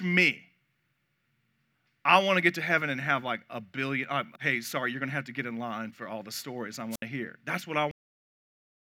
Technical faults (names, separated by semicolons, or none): wireless microphone squelch dropout; cut-off end